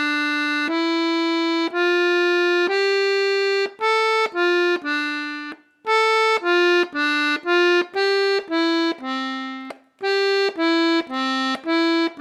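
From the start, the sender's audio clock runs roughly 3% slow against the receiver's, a clock drift between sender and receiver. Samples arrive more slowly than they are played out, so the jitter buffer keeps draining toward empty. Instead of letting it run dry, the receiver has to keep stretching what it has, and that constant shortfall is what sets up the uneven timing heard throughout.

Repeated timing corrections follow from 0.24 s to 12.01 s. To cover the gap, the receiver repeatedly duplicates short slices of audio, always adding rather than cutting, and at irregular spacing. Together they stretch the passage by about a third of a second, so it plays at roughly 98% speed. Each repeat is tiny, heard, if at all, as a faint stutter or hiccup, and the sound's pace feels slightly dragging and unsteady rather than smoothly slowed.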